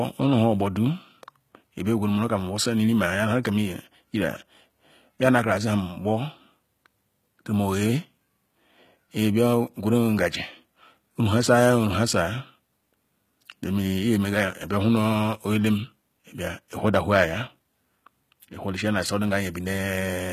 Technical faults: HE-AAC compression

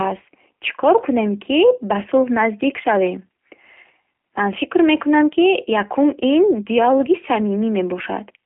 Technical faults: G.729 codec

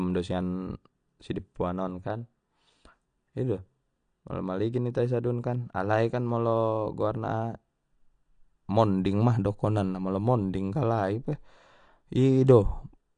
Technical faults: AAC compression

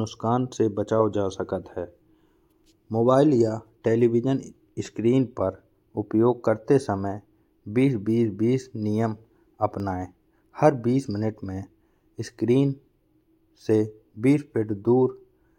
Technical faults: CD scratch ticks

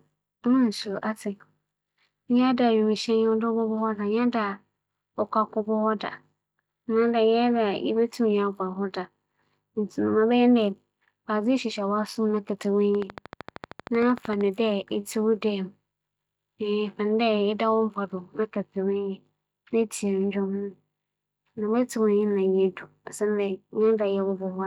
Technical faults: train of clicks

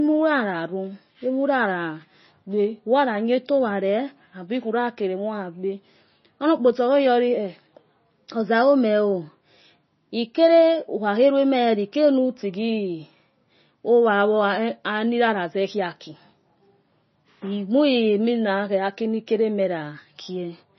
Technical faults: MP3 compression

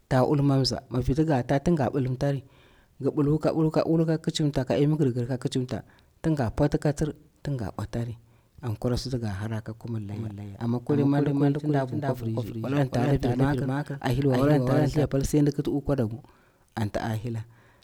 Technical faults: doubled audio track

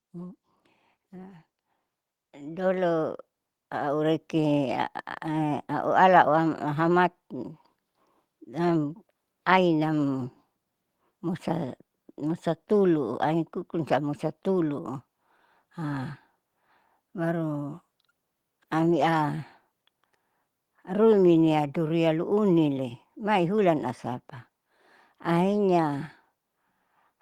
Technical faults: automatic gain rising

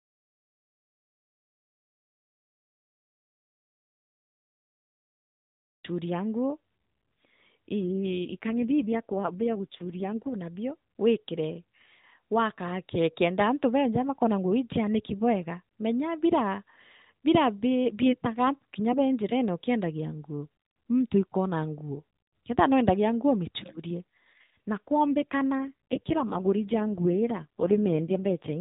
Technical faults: AMR rate drop

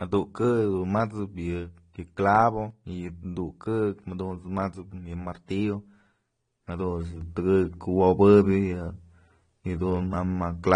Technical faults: transcoding between lossy codecs; sudden gain jump

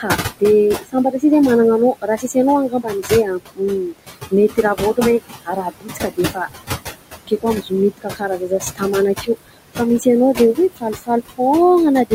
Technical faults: noise suppressor artifacts; speech cut by the noise suppressor

